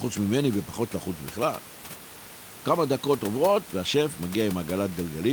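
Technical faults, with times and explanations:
No technical faults can be heard in this clip.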